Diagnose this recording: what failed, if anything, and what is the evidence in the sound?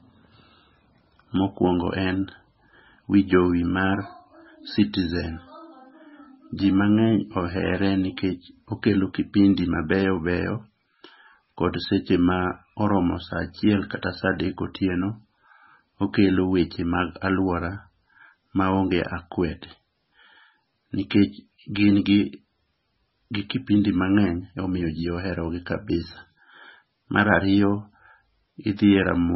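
The codec stage failed. The speech has nothing above 5.6 kHz for the whole clip. The top is sliced off at one fixed frequency. The sound is heavily watery and swirly, and the s sounds chirp metallically. This is likely MP3 compression starved of bits. The damage fits a very low bitrate around 16 kbps. The encoder cut the treble and dropped weak frequency lines. Those lines flicker on and off between frames.

The same codec also causes pre-echo at 21.74 s. A short hiss, about 13 ms long, arrives just before a sharp attack. The attack itself sounds soft and smeared. The encoder spread its quantisation noise across the whole block. That noise was sized for the loud onset, but it also filled the quiet moment before the onset.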